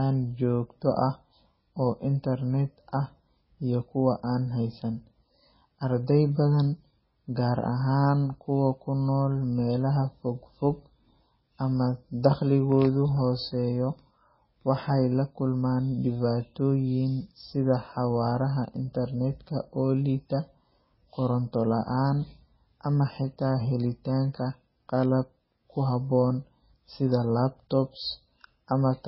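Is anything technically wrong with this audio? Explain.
Yes. Throughout the speech, nothing sounds above 5.6 kHz and the sound turns watery and swirly, likely from heavy MP3 compression at a very low bitrate, perhaps 16 kbps. A spectrogram would show a flat ceiling at 5.6 kHz with flickering holes below it.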